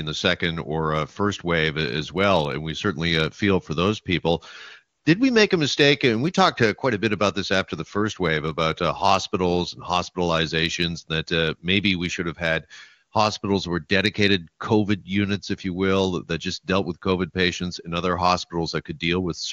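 A speech clip carried over an AMR wideband (HD Voice) link, where the wideband coding sounds clean enough to fit one of the top AMR-WB rates, around 23.85 kbit/s. The one fault is AMR comfort noise from about 4.97 to 5.05 s, right after "feel for those people" and before "did we make a". For roughly 80 ms the phone decided nobody was talking and stopped sending speech frames, so the receiver patched the gap with smooth synthetic noise in place of the real background.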